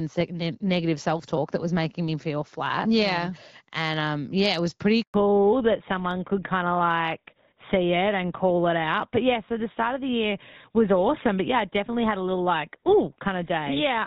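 A speech recording in which a network handover at 5.02 s drops all frames, leaving a handover gap of 120 ms where the sound cuts out completely until 5.14 s. Right after it, the call falls back to narrowband: the link leaves an HD Voice path that sounds like AMR-WB at around 12.65 kbit/s for what fits GSM full rate, so from 5.14 s to the end nothing above 4 kHz remains and the sound turns duller and rougher.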